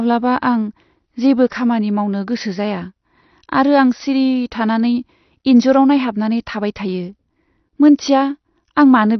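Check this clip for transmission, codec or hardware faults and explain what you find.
One codec fault runs through the whole recording: AAC compression. The speech has nothing above 6 kHz, so it sounds dull, and sibilants and held vowels carry a smeared, warbling, fizzy texture. This is likely from an AAC-LC encoder run at a low rate, consistent with about 32 kbps. With too few bits, it cuts the top band and quantises each frame's spectrum coarsely. A plain low-pass filter would also sound dull, but it would not produce this frame-by-frame warble.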